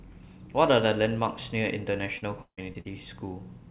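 From 2.18 to 2.87 s, repeated packet loss (robotic sound) breaks up the speech. Four gaps, the longest 156 ms, are patched by stretching the preceding sound, so about a third of that stretch is filled in and comes out choppy, with pieces missing.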